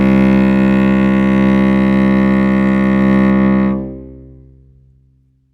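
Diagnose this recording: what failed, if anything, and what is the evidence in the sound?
From 3.30 s to the end of the music, the top end drops away and the sound turns dull and muffled. This is de-emphasis applied wrongly, most plausibly in the playback stage: a treble-cut filter meant to reverse pre-emphasis acted on material that had none, or acted a second time. The response falls smoothly rather than at a sharp cutoff, reaching about 10 dB down at 10 kHz relative to 1 kHz.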